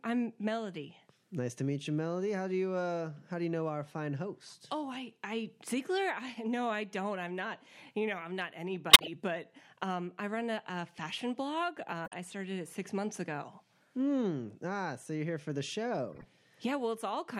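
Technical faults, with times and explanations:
8.90–9.08 s, corrupt frame muted: the decoder rejected damaged compressed frames, leaving an abrupt 0.18 s silent hole, about six frame lengths, with timing intact.
12.06–12.14 s and 16.11–16.25 s, corrupt frame decoded: damaged frames played anyway, misplacing energy into brief artifacts peaking around -25 dBFS and a fainter one around -40 dBFS.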